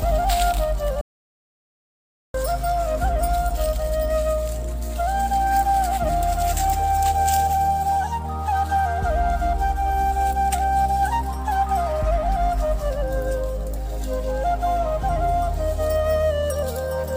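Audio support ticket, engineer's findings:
Audio dropout to silence at 1.01 s, back at 2.34 s. Roughly 1.3 s of dead silence, not even room tone, so it's not a gate or a quiet passage. Sound drops out mid-flow and picks up again mid-flow, and whatever happened in that gap is gone for good. Likely the input feed went away for a moment (loose cable, link hiccup or a stray mute) while the recorder kept writing silence. Worth checking connections and mute state upstream.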